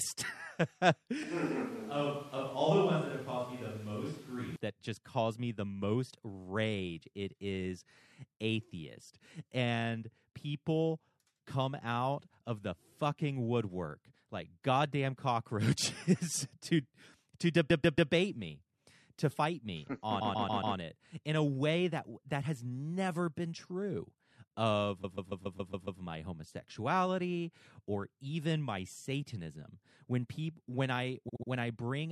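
From 1.23 to 4.56 s the speech turns roomy and hollow, with thinner bass, a level about 5 dB lower and room noise sitting only about 25 dB below the voice. This is most likely a switch to a distant microphone, after the close mic's feed dropped out. The return to the close, full sound is abrupt, just before "that just caused me".

At 16.17 to 16.36 s there is processor overload crackle: a short gritty tear riding on the speech. The processor failed to deliver several very small buffers in a row, each well under a millisecond. The missed buffers were skipped rather than held, so each leaves a hard-edged gap, and the run of gaps fuses into a brief crackle that stops once the load eases.

Repeated frames produce four stutters. From 17.69 to 18.11 s, after "to to" and before "me to fight me", a 139 ms block plays three extra times, adding 0.42 s. At 20.20 to 20.76 s the same size block repeats four extra times (0.56 s added). 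At 25.03 to 26.01 s it repeats seven extra times (0.98 s). At 31.28 to 31.49 s, after "satanism when people when", a 70 ms block plays three extra times (0.21 s). The clip runs longer by the repeated time.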